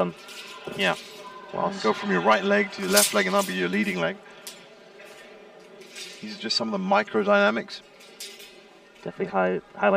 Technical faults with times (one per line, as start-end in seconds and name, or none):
0.00-9.96 channel delay (comb filtering)